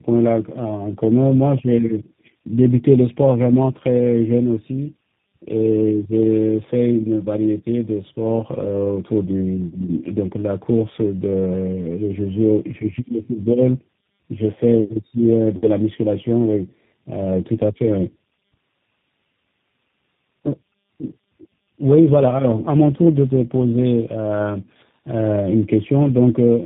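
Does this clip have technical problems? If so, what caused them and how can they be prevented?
Yes. Throughout, the speech sounds rough, muffled and warbly, with nothing above 3.7 kHz. This is tandem speech coding: three speech codecs in a row, GSM full rate, CVSD and G.729A, each re-encoding the previous one's degraded output. Prevent it with transcoder-free operation that passes the encoded speech unchanged across network borders.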